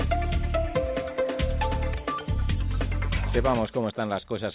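A skip ahead at 1.94 to 1.96 s makes playback jump forward with no filling at all: around 0.7 s of audio is simply gone, and the sound on either side of the cut is butted together almost directly. This happens when a stretch of audio is discarded, either lost in transit or thrown out by an overflowing jitter buffer, while later audio was already queued. The receiver then resumes from the newer material, so the delay drops by roughly that same amount. A jitter buffer speed-up follows from 3.53 to 4.00 s, where the audio runs at about 111% of normal speed while keeping its original pitch, so that passage sounds hurried. The buffer was holding more audio than its target, and to pull the delay back down the receiver cut out short pitch-period-sized pieces again and again, trimming something like 70 ms in total. All of this passes through a G.711 A-law call path at 64 kbps, which carries nothing above 4 kHz and gives the audio a narrowband, telephone-like top end.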